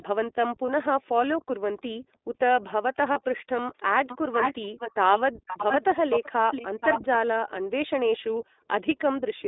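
The whole clip of speech runs through the iLBC codec. Everything sits in a narrow band of roughly 250 Hz to 3.7 kHz, with a rough, slightly synthetic edge that's plainly audible. That fits the 15.2 kbps mode, coding 20 ms frames independently.

At 0.66 to 0.70 s, and again at 3.12 to 3.18 s, there are lost iLBC frames, about 20 ms and 40 ms of audio. The decoder fills each gap by repeating the last pitch cycle with some noise, so you get a brief held, buzzy blip. Because every frame stands alone, the sound snaps back right away.

Faint delayed copies of the speech turn up at 1.78 to 1.82 s and 2.13 to 2.18 s, about 306 ms behind. From 3.77 to 7.19 s a much stronger copy trails by 466 ms at nearly the same level as the speech. That sounds like an echo leak, likely a far-end loudspeaker whose echo canceller didn't fully remove what its microphone caught.

At 5.32 to 5.43 s and 7.6 to 7.8 s the room sound dips by up to about 40 dB. 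This is background gated by the echo canceller, which clamps the microphone while the loudspeaker plays and releases it shortly after.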